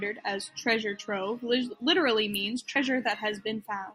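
A short speech clip with one glitch: at about 2.75 s the audio jumps forward, a case of compressed frames skipped. Roughly 50 ms of sound just isn't there, which fits a couple of frames going missing from a codec working in frames of about 24 ms, either dropped from the file or rejected by the decoder as damaged.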